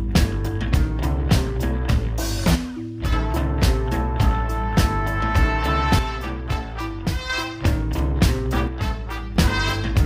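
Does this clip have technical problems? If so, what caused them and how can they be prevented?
Yes. The level drops abruptly by about 6 dB three times, from 2.56 to 3.13 s, from 5.99 to 7.30 s and from 8.68 to 9.36 s, and then snaps back. The likely cause is one channel dropping out. With one side of the stereo pair gone, the mono sum keeps only half the shared material, and anything unique to the missing side vanishes. On a waveform, the envelope shrinks to roughly half height with sharp vertical edges. A spectrogram shows uniformly dimmer bands with hard boundaries. To prevent it, secure the cables and connectors on both channels and monitor each channel's meter separately during capture.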